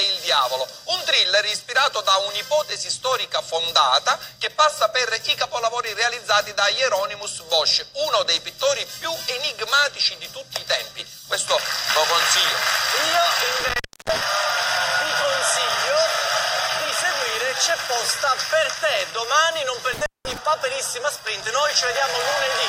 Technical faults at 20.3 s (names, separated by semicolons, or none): intermittent contact